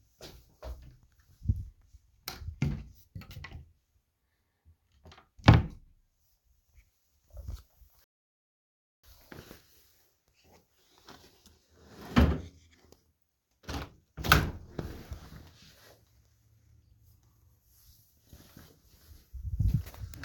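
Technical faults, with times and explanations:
8.04–9.04 s, rebuffering stall: the sound drops abruptly to silence for just under a second and then picks up exactly where it broke off, with nothing skipped. Playback drained its downloaded buffer and paused until more data arrived, inserting about 0.99 s of dead time.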